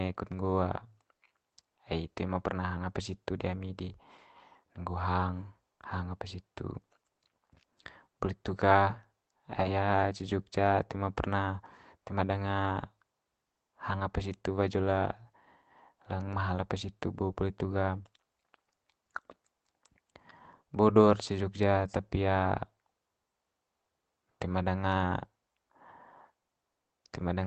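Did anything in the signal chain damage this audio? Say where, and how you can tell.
Yes. Network stage: from 9.51 to 9.69 s, about 100 ms of speech turns rough and noisy but never drops out, the signature of a lost packet rebuilt from error correction rather than concealment.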